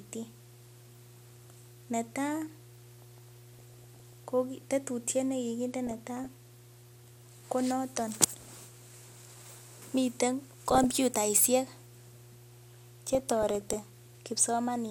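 A steady 60 Hz mains hum, roughly 25 dB below the speech, runs throughout, pointing to a ground loop or nearby transformer coupling power into the signal. DAB burbling appears at 3.53–4.25, 5.87–6.32, 8.24–8.65, 10.43–10.91 and 13.13–13.76 s. Bit errors slip past error correction into the audio frames, putting short blips of noise into single sub-bands.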